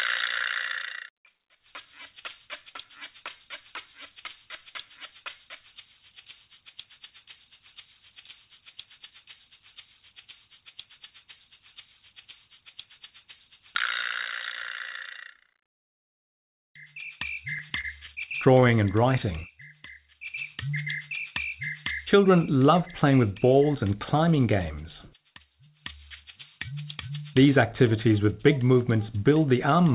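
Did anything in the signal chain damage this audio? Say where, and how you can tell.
Yes. The damage is network jitter in the call path: repeated stalls (stutter) between 17.56 and 18.71 s. In that span the jitter buffer ran dry ten times. Each time, the receiver stretched the last sound to cover the wait, so 127 ms of extended audio fills about 11% of the stretch, with the longest single gap 29 ms. Nothing is lost, but the sound drags and stutters. The band ends at 4 kHz, which fits a G.711 mu-law call codec.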